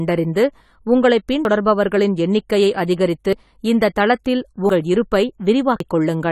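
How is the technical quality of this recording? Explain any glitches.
The recording has two audible problems: codec damage across the whole speech clip and four short skips where audio is missing.

AAC compression: Throughout, the speech sounds dull and smeared, with a fizzy, warbling texture on sibilants and held sounds. This is likely low-bitrate AAC-LC, around 32 kbps. At that rate the encoder lowers its cut-off and spends too few bits on each frame's frequency lines, which leaves gaps or noise-filled bands in the spectrum.

Dropped buffer (overrun): At 1.45, 3.33, 4.69 and 5.80 s the audio jumps ahead. The 3.33 s skip comes just before "இந்தத் தளத்தில்", and the 4.69 s skip comes just after "இந்தத் தளத்தில்". There is no silence, only an abrupt splice with about a tenth of a second gone each time. The likely cause is the capture program falling behind, so the hardware overwrote samples before they were read and the remaining audio was joined directly.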